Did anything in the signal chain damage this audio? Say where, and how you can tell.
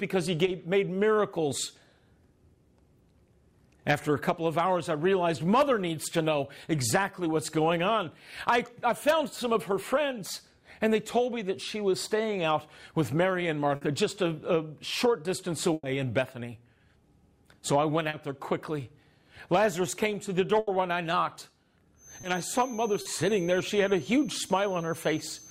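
Yes. The damage happened on the network, with a second problem in the acoustic path near the end. Short concealed packet loss occurs at 0.45 s, 18.09 s, 22.21 s and 23.01 s. Each time, about 20 to 40 ms of audio never arrived, and the decoder filled the hole by extending the preceding sound before crossfading back. Each event is heard as a brief smear or wobble. On a spectrogram it appears as a short stretch of smoothed, repeated texture where the fine detail stops changing.

A burst of packet loss hits at 13.75 s (60 ms), 15.73 s (100 ms) and 20.59 s (80 ms). Here several consecutive packets were lost. Concealment held the last sound and turned it down, so each gap becomes a fading buzz or hiss, and the audio then resumes further along with that stretch missing. At 15.73 s the fade reaches roughly 20 ms of true silence. The waveform shows a decaying envelope followed by an abrupt restart.

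A feedback whistle enters at 21.9 s and runs to the end. It is a thin tone at 6.2 kHz, about 25 dB below the main signal, swelling and fading slowly in level. It is likely caused by a loudspeaker-to-microphone loop sitting at the edge of oscillation, with one frequency ringing without running away. On a spectrogram it is a single horizontal line at 6.2 kHz that persists through pauses.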